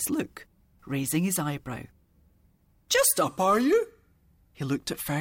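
At 3.24 s the sound abruptly slows and drops in pitch, and stays that way through to the end of the clip at 5.20 s. Playback runs about 6.5% slow, and pitch falls by 115 cents, a little over a semitone flat. The change is a single step, not a gradual slide. This is a drift correction step. Clock-matching software likely changed the playback rate in one jump to rebalance its buffer.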